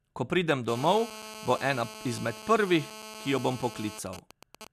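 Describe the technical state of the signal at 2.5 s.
GSM phone buzz runs through 2.5 s, spanning 0.68 to 3.99 s: a nearby 2G phone on a call transmits bursts 217 times a second, and the audio circuitry rectifies them into a steady, raspy 217 Hz buzz rich in harmonics, about 16 dB below the speech.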